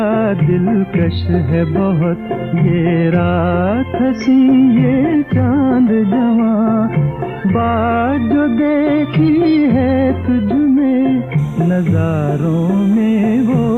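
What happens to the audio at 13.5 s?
Timecode bleed runs from 11.38 s to the end of the clip, covering 13.5 s. Linear timecode from a neighbouring track or cable is leaking in, its square wave flipping between tones near 1 and 2 kHz, which fits 29.97-frame code. It sounds like a faint, steady chirping warble well below the main sound.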